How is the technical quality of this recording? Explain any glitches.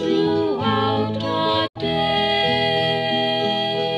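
There's one clear glitch: a digital broadcast dropout running from about 1.66 to 1.77 s. The receiver stopped getting usable frames, either losing the signal or failing checksums, so it muted rather than play garbage. The sound fades out over roughly 20 ms, sits silent, then comes back mid-stream. About 72 ms of material is simply gone, which fits around three lost frames. You hear it as a short, clean hole, not a crackle or a smear.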